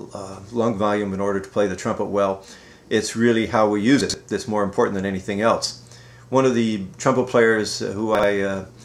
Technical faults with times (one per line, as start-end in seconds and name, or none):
4.01-4.14 chunks out of order
8.15-8.23 chunks out of order